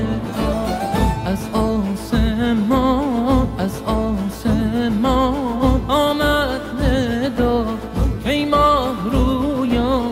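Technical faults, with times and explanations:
Nothing technical stands out here, so there's nothing to list for this one.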